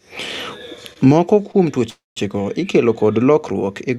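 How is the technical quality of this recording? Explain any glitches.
The speech passes through a call codec, audible as a top end that stops near 12 kHz, and it has three timing glitches.

At 0.93 to 0.98 s and again at 1.52 to 1.56 s there are short stalls from a late packet. Each time, a packet missed its slot and the jitter buffer emptied, so the receiver held the last bit of sound, for 25 ms and then 18 ms, until the data arrived and playback resumed from the same point. Nothing is lost. You hear a sound drawn out slightly too long, with a faint buzz or dip.

From 1.90 to 2.18 s there is a call audio freeze, likely caused by packets delayed in transit draining the jitter buffer. The receiver extended the last sound for about 267 ms. It starts as a fading buzz or hiss and ends in roughly 170 ms of silence. Playback then continues where it stopped, so a pause has been inserted rather than anything cut out.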